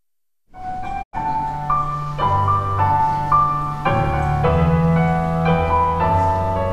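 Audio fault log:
1.01–1.15 s, digital broadcast dropout: the receiver stopped getting valid frames and muted, so sound fades over 20 ms into a 96 ms gap, consistent with four dropped frames.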